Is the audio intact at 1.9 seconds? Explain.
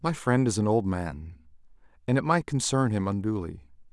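Yes, at 1.9 seconds the speech plays through intact, with no dropout, click or other fault at that point.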